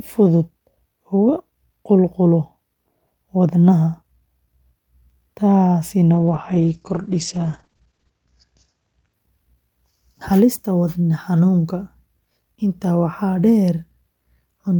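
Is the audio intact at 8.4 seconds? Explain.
No. At 8.4 seconds the speech sits inside a call bitrate drop running from 6.15 to 9.19 s. The call's bandwidth estimate fell and the encoder was pushed from 48 kbps down to 9 kbps, staying at its lowest for about 2 s. At that rate it codes far more coarsely and narrows the audio band from 20 kHz to 8 kHz, so the speech sounds rough, watery and muffled, with its top end gone.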